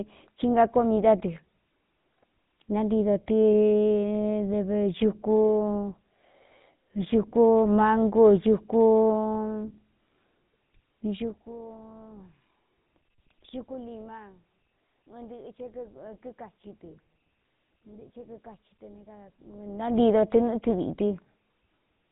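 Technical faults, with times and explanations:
Throughout: GSM full-rate codec. The speech is plainly buzzy and gravelly, and nothing passes above 3.8 kHz. Coarse pulse-driven excitation, fitting a 13 kbps rate, discards fine detail.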